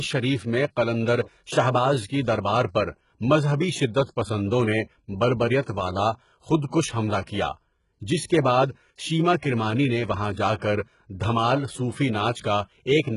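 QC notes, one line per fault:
Throughout: HE-AAC compression, heavy. The speech has a band-limited top with nothing above about 11.1 kHz, and the treble that remains sounds synthetic: sibilants come out gritty and lispy, with a metallic sheen. This is most likely HE-AAC at a very low bitrate, around 12 kbps. At that rate the codec spends its bits on the lower spectrum and rebuilds the upper bands by copying lower ones up under a coarse envelope, so the high harmonics never line up with the real ones.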